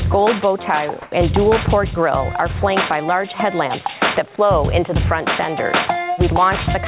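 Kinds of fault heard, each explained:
Gain pumping: The level keeps ducking under each loud sound and recovering, a swing of around 15 dB, so the whole thing sounds squashed. This is likely an input gain set far too high, with a fast limiter pulling it back down on every peak.
Comfort noise in place of the background: From 1.02 to 1.12 s, about 100 ms, the real background gives way to a smoother noise of a different tone, about 1 dB quieter. The sender likely stopped transmitting during a lull, and the receiver filled the hole with synthetic noise.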